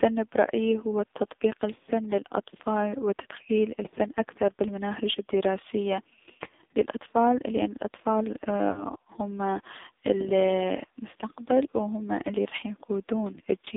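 AMR narrowband mobile codec damage runs through the whole of this speech recording: the line passes only about 200 Hz to 3.7 kHz, and the heavy buzzy, synthetic coloring points to a low rate around 5.9 kbps, where too few pulses per subframe drive the vocal-tract model. Lost AMR speech frames occur at 8.72–8.84 s, after "للأطفال لأن الأطفال" and before "هم المستقبل و هم", and at 12.50–12.54 s, after "المستقبل و هم الي". Each time the decoder repeats the previous pitch and filter settings at falling gain, producing a brief warbling dip before the voice returns.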